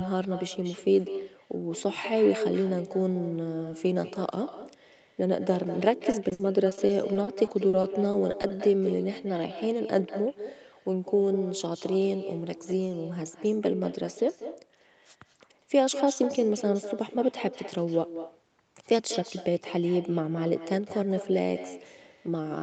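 Echo with no canceller runs through the whole of this speech clip. Every phrase is followed roughly a fifth of a second later by a quieter, thinner copy, about 12 dB below the direct speech. That delay fits a round trip through the call: the far end played the audio over a loudspeaker, its microphone caught it again, and nothing subtracted it before it was sent back. Repeated packet loss, heard as robotic sound, affects the span from 6.11 to 8.51 s. The speech turns choppy there because short stretches keep dropping out, the longest about 60 ms. Each hole is patched by stretching the preceding sound, which adds up to roughly 380 ms of synthetic fill, about 16% of that span. The gaps come so close together that the audio never settles. Throughout, nothing is heard above 8 kHz, as expected from the call path.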